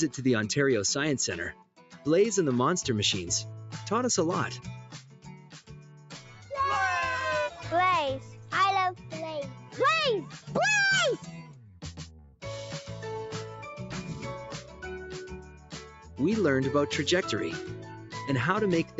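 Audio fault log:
throughout, noise suppressor applied to music or sounds: A speech-tuned noise suppressor stayed active on non-speech audio and treated steady tones, ambience and decays as noise. Its gain swings by about 10 dB, so sustained sound sinks while onsets pass, giving audible pumping and thinning.
1.52–2.06 s, 4.81–6.50 s, 8.19–10.52 s, 11.18–12.43 s, 14.61–16.19 s, 17.77–18.15 s, sound cut by the noise suppressor: The suppressor mistook these passages for noise and attenuated them harder, by about 11, 11, 9, 11, 10 and 6 dB at deepest. Held and fading sound drops away and its tails end abruptly.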